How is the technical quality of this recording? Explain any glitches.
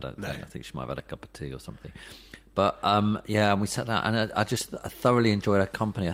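The recording has a couple of related timing glitches. Clock drift between sender and receiver runs throughout: the sender's clock is about 1.5% slow, so the receiver's buffer keeps draining and the timing wobbles. The repeated timing corrections run from 0.38 to 5.87 s, where the receiver keeps padding with short repeats, adding about a tenth of a second.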